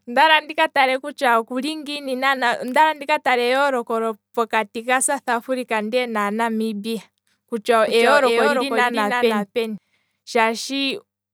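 From 7.88 s to 9.78 s a doubled audio track appears: a second, full-band copy of the speech trails about 300 ms behind, roughly 5 dB quieter, with no decay or room colour. It cuts in and out abruptly, likely from a second, slower capture path.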